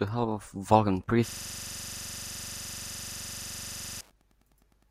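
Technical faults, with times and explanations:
throughout, Wi-Fi interference: faint, very regular ticking about ten times a second, every 102.4 ms, roughly 50 dB below the speech. A nearby radio's beacon is rectified by the audio circuit. Its metronomic timing sets it apart from random crackle or electrical hum.
1.29 to 4.01 s, system hang loop: one 42.67 ms slice of speech repeats exactly, which fits a 2048-sample buffer. The result is a steady buzz at 23.4 Hz, lasting nearly three seconds while the driver stalled. Unlike a dropout stutter, nothing new is heard until it ends.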